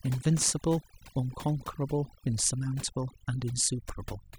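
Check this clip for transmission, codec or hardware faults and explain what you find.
One fault stands out, and it runs through the whole speech clip: overdone noise removal. A noise reducer set far too aggressively is switching individual frequency bands down or off whenever their level sits near its noise estimate, and the quieter parts of the voice fall under that threshold along with the noise. The background drops and breaks up into twinkling specks. On a spectrogram this shows as a dark floor dotted with isolated bright flecks and voice harmonics that break into patchy, ragged islands.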